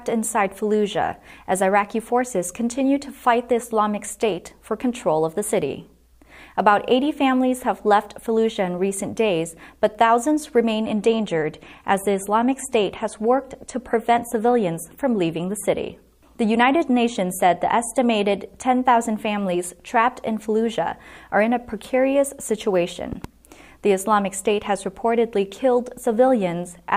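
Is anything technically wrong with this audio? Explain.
Yes, two faults.

From 10.83 s to 18.83 s, the adaptive stream dropped to a lower bitrate as the connection slowed. Codec artefacts rise, which fits a switch from about 128 to 48 kbit/s MP3. The change is abrupt and leaves no gap.

At 23.13 to 23.27 s, a loud pop, likely a voltage step from a plug, switch, static or driver glitch, was added and shaped by downstream circuits. It is heard as two sharp pops a few decibels above the sound, which continues underneath.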